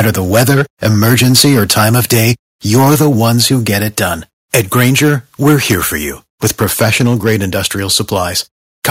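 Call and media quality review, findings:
Microphone overload at 0.00–2.32 s, 2.72–3.98 s, 4.54–5.15 s, 5.45–5.76 s (just before "for you"), 6.43–7.37 s (just after "for you"), 7.93–8.17 s and 8.84 s to end. Harsh, crackly edge on loud syllables. Likely cause: mic input gain too high, peaks driven about 3 to 9 dB past converter full scale and flattened. Worst at 5.45–5.76 s, roughly a tenth of samples clipped.

Microphone volume stepped down at 3.02 s and 7.07 s. Sudden level drop of about 2 dB, speech and background together, each inside an ongoing clipped stretch. Likely cause: call software's input gain control reacting to clipping and lowering device volume in one step. Too small to end the overload, which continues after both steps.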